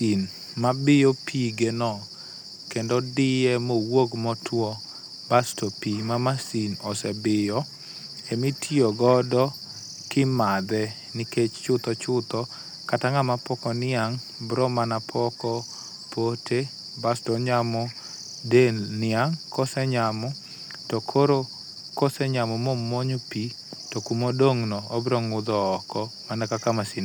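Nothing technically wrong turns up in this speech recording; it's a plain stretch of talk with no fault worth flagging anywhere along the way.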